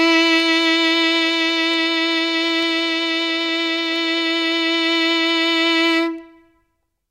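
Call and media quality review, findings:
Word clock ticks through the music, 0.40 to 7.07 s. About fifteen sharp ticks, roughly every 0.4 s, uneven strength. Probable cause: receiving device on its own clock, unlocked to the digital source, roughly 50 ppm apart. Each slip drops or repeats one sample.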